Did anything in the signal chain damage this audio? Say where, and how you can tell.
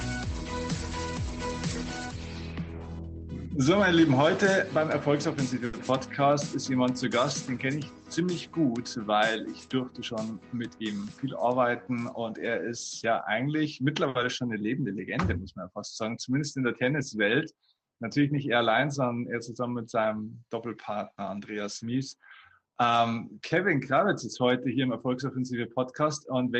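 Yes. Short stalls from late packets occur at 5.65 to 5.91 s and at 14.09 to 14.18 s, in the network and jitter buffer stage. The buffer ran dry, so the receiver held the last sound for about 80 ms and 60 ms, then resumed without losing anything.

A jitter buffer speed-up runs from 10.68 to 11.26 s, where the audio plays at about 111% speed with unchanged pitch and sounds hurried. Having overfilled, the buffer trimmed repeated pitch-period slices, around 70 ms in total, to reduce delay. The call codec band-limits the audio to 8 kHz throughout.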